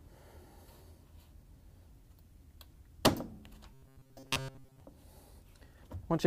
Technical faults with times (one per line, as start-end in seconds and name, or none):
3.73-4.80 robotic sound from repeated short buffers